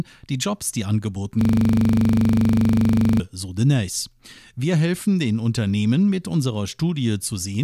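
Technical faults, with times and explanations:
1.41–3.20 s, system hang loop: the sound abruptly locks into a rough, mechanical buzz at 25 Hz, with one 40 ms fragment repeating exactly, about 45 times, before normal audio returns. The computer or its audio driver stopped supplying new data, while the sound hardware kept replaying the same ring buffer. A loop this short repeats too fast to hear as separate stutters, so it fuses into a steady rattling tone at the loop rate.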